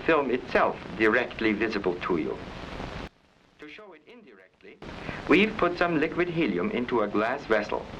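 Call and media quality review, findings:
Level collapse, 3.08 to 4.82 s: everything, background included, falls about 25 dB. Likely one channel inverted upstream, so the shared content cancels in the mono sum. Unlike a gain dip or mute, only the inter-channel mismatch remains.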